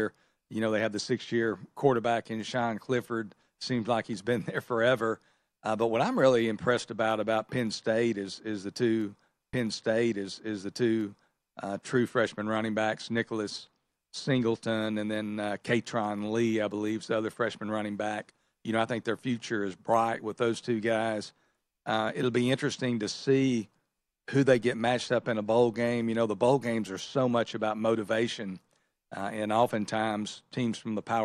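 Stream segment repeated at 9.52 to 11.52 s in this speech clip: after "is is the two", the player replays about 2.0 s of audio, with a small blip at the jump back, before "uh true freshman running".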